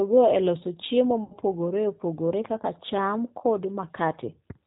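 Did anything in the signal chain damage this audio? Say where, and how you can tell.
Yes. Throughout the speech there is a rough, slightly synthetic quality, with nothing audible above 4 kHz. This is codec damage from G.729 coding, which fits an 8 kbit/s stream. Speech is rebuilt from a vocal tract filter, pitch prediction and sparse pulses rather than sent as a waveform.

From 1.24 to 1.36 s the speech smears into a buzzy tone or coloured noise that fades, and stays weak just afterwards. This is VoIP packet loss concealed by the speech codec, consistent with about seven lost 10 ms frames. The decoder extended its last pitch and filter while lowering the gain.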